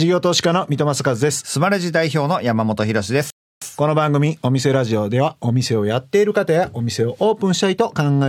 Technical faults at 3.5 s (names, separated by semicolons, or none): playback stall